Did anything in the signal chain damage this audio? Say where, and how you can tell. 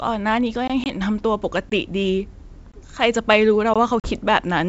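Yes. The storage or playback stage delivered the audio in one-second chunks with a gap between chunks. Silent holes about 20 ms long, with hard edges, appear at 0.68, 1.70, 2.72 and 3.74 s, about one second apart. That regular spacing points to a player or codec padding that leaves a short empty stretch at every chunk join. No sound is lost, but the speech is chopped at each boundary.

The network stage added packet loss on an ADPCM call. The first hole is about 20 ms, near 0.84 s, which fits a single lost packet. The second is about 40 ms, near 4.00 s, which suggests a couple of packets. Each dropout was filled with silence. The receiving decoder's adaptive predictor and step size then no longer matched the sender's. The speech comes back slightly distorted, and it recovers within roughly 0.90 s and 4.12 s respectively. The G.722 coding at 64 kbit/s underneath keeps its clear wideband top end up to 7 kHz.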